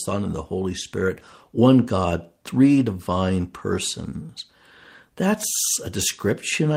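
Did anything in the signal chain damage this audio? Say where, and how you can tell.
No, nothing along the signal chain has left an audible mark on this speech recording; the signal holds steady and intact with no sign of damage at any stage.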